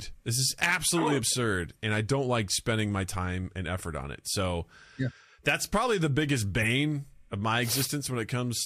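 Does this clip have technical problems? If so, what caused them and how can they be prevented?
Yes. A corrupt frame decoded occurs from 6.62 to 6.65 s, just after "that's probably the biggest": bits flipped inside about one compressed frame, and the decoder played it anyway, so misread codes and gains scattered energy into the wrong frequencies for that frame's duration. Checksums on each frame, with damaged frames dropped and concealed rather than decoded, would prevent it.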